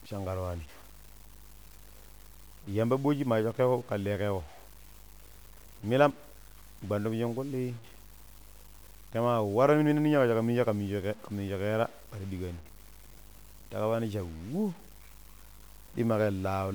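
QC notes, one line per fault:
Throughout, low bit depth without dither: the speech carries a grainy, rasping distortion that tracks each syllable, sitting roughly 25 dB below the level of the speech. Quiet word endings and pauses turn gritty or sputter and then drop to silence. This is likely truncation to very few levels with no dither, which fits about 7 bits, so the rounding error follows the waveform and changes with the sound.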